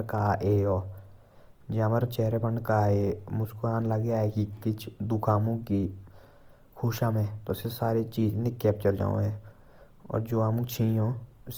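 Opus compression runs throughout: band energies stay intact but starved bands are filled with folded or noise content, leaving the speech rough and grainy, likely near 24 kbps.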